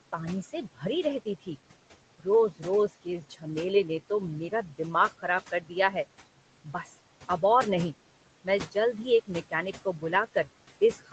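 Noise suppressor artifacts run through the whole clip. The suppressor pulls the room noise down by about 18 dB wherever it judges a band to be steady noise. The room noise sits about 16 dB under the speech. It drops away in the gaps and comes back beneath the speech.

Speech cut by the noise suppressor comes in five spans: 0.12 to 1.48 s, 2.19 to 3.46 s, 4.0 to 5.95 s, 6.64 to 7.43 s, and 8.44 s to the end. Here the suppressor mistook soft parts of the speech for noise and turned them down with it. The deepest drops are about 16 dB in the first two spans and about 14 dB in the last three. Only short pieces are hit within each span, about 0.15 to 0.4 s in total per span. Those consonants and endings sound swallowed or faint. Through the Opus call path, nothing reaches above 8 kHz.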